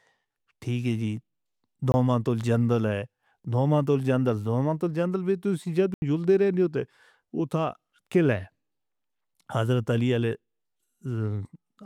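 At 1.92 to 1.94 s, just before "تو جنگل", a 20 ms block of digital silence cuts the sound out and back abruptly. At 5.94 s an 80 ms one leaves a short hole. Samples were zeroed, likely from unfilled buffers.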